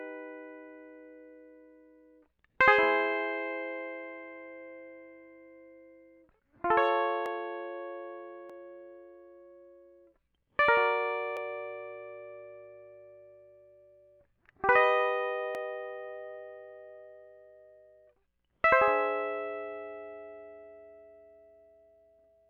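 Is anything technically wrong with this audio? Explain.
Yes. Dropped samples at 7.26, 8.50, 11.37 and 15.55 s: each is a single sharp click in the music, likely caused by roughly 0.7 ms of the stream going missing, so the waveform leaps abruptly to a later value without removing any audible sound.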